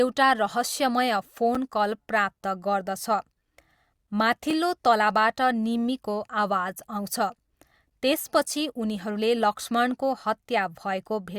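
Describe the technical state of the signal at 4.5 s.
A block of digital silence occurs at 4.51 s: for about 2.9 ms the speech drops straight to silence and returns with no fade, most often because an output buffer went unfilled in time, which fits a 128-sample block. The hard edges and short length make it a tick or dip rather than a gap.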